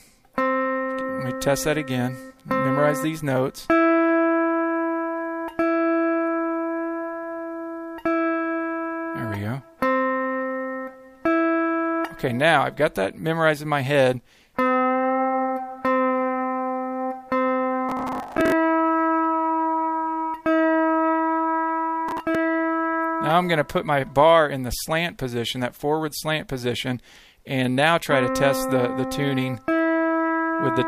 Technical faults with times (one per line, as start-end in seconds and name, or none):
17.89-18.52 processor overload crackle
22.09-22.35 processor overload crackle